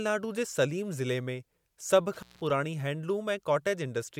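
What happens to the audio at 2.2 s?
An intermittent contact fault runs from 2.13 to 2.50 s, just after "में सभ". A loose cable or plug briefly loses connection, so the speech drops out for about 188 ms, with crackle marking the moments the contact breaks and remakes.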